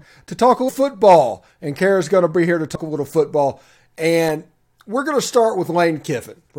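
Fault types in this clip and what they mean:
Compressed frames skipped: whole encoded frames went missing, so the sound jumps ahead about 100 ms, then 150 ms.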